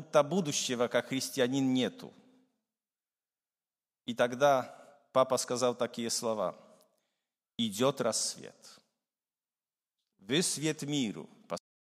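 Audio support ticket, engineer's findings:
Cut-off end at 11.58 s. Speech stops mid-sound and drops straight to digital silence, no decay. Final buffers never written or played out.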